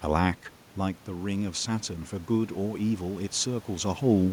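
At 0.79 s, automatic gain rising begins. The input has just dropped by about 10 dB, around where the talker moves back from the microphone near half a second. The gain control hears a quiet signal and pushes its gain up slowly. The climb is about 4 dB, running until 3.99 s. The speech and the room noise swell together across those three seconds. The background lifts in step with the voice.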